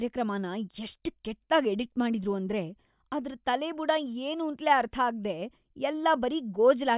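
No technical faults can be heard anywhere in the recording. The speech runs from beginning to end without any audible interruption or disturbance.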